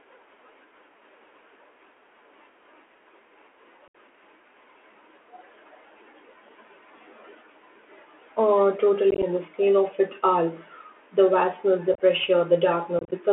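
From the start the speech sounds narrow and boxy, with scratchy s sounds, distortion on loud high sounds and a granular hiss beneath. The band runs only from 250 Hz to 3.4 kHz. This is the Bluetooth CVSD headset codec, whose one-bit delta steps cannot keep up with fast changes, which fits a 64 kbit/s CVSD link.

Abrupt holes break the speech at 3.88–3.95 s, at 9.11–9.24 s just before "and the scale of", at 11.94–12.01 s just after "vastness the", and at 12.99–13.11 s. The later three sound chopped and crackly. This is unconcealed Bluetooth headset packet loss, with bursts of lost few-millisecond voice packets replaced by silence.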